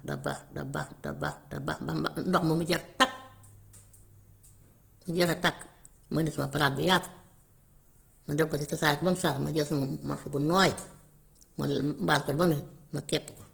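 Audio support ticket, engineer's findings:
Speech grainy, rough and noisy for the whole clip. Likely Opus compression, CELT mode, filling starved bands with noise. Full band to 20.2 kHz. Fits a 16 kbps stream.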